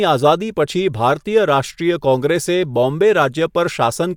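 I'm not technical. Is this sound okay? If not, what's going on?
Yes, this sound is okay, and nothing is going wrong in it.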